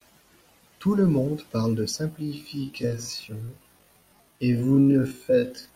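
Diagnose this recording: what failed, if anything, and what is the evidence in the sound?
Software time-stretching, likely in an editing or playback stage, slowed this speech to 0.52 times its pace. From 2.09 s, just after "le monde parle de", to the end, the pace drops abruptly while pitch holds, and repeated short segments make it drag.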